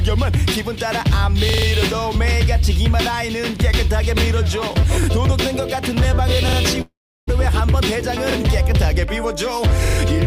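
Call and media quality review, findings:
Repeated buffer at 1.49, 5.04, 6.49, 8.32 and 9.85 s. Playback device underrun. The same 43 ms piece replays one to four times with hard joins, heard as a stutter. Fits a 2048-sample buffer.

Long network dropout, 6.81 to 7.29 s. Likely a network stall. Last sound is stretched into a fading buzz, then about 330 ms of silence. Audio resumes with roughly 0.46 s missing.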